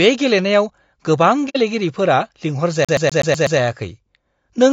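Throughout this speech clip the voice sounds rough and grainy, with noise filling the gaps between harmonics and a thin, synthetic-sounding top band, likely from low-delay AAC compression (AAC-ELD) at a bitrate around 32 kbps, whose short frames resolve pitch harmonics poorly. From 1.49 to 1.57 s the sound fades into a soft-edged hole of about 60 ms, consistent with two lost frames. This is AAC frame loss with muting: the decoder zeroed the missing spectrum and the overlapping windows smoothed the edges. From 2.85 to 3.59 s a 124 ms fragment plays six times with a short mute at each jump, the fast, even stutter of a CD stuck on one turn, where a scratch throws the laser back one track at the same spot on every rotation.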